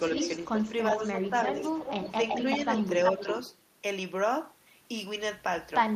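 From 0.15 to 3.57 s an echo leak adds a copy of the speech delayed by 380 ms and only a few dB quieter, likely from loudspeaker pickup the echo canceller missed; the spectrogram shows repeated, shifted harmonic patterns. Speech suppressed in double talk follows, at 0.43–0.65, 0.97–1.58 and 2.11–2.63 s, where the talker briefly dips by roughly 5 to 10 dB, likely an echo canceller ducking during overlap, visible as shallow waveform notches.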